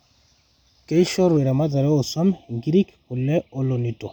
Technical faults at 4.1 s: channel delay (comb filtering)

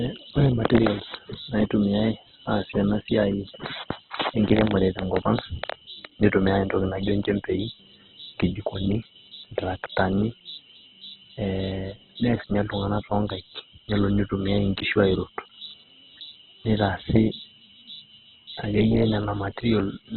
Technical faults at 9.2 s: Opus compression

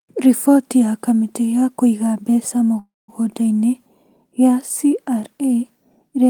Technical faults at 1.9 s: none

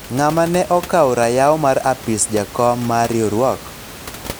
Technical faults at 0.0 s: none

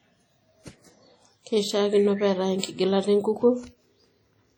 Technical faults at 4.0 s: WMA compression

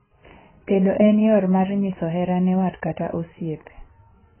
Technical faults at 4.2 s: AAC compression

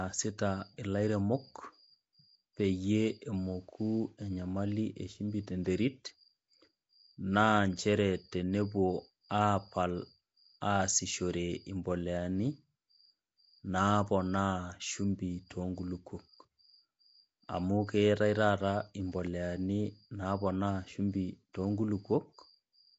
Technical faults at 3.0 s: Nellymoser compression

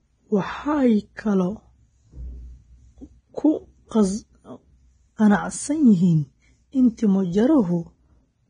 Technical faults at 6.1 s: Vorbis compression

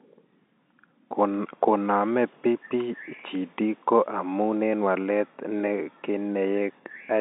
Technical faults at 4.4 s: none

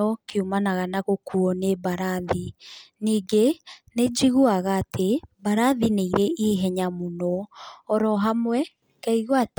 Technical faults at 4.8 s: none

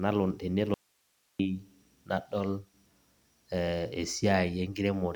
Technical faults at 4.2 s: none

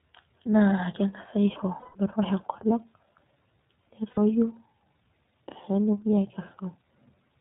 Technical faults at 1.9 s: iLBC codec; lost iLBC frames

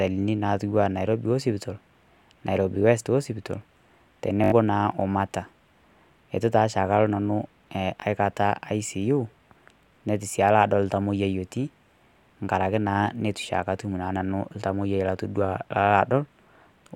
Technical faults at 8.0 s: repeated buffer

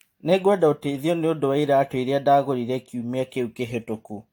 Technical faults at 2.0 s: generation loss

